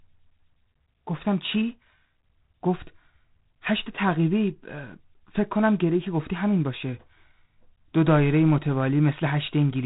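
Throughout, G.726 ADPCM coding cuts everything above 3.9 kHz, and a harsh, rasping hiss tracks the speech level, which fits coarse 24 kbit/s quantisation.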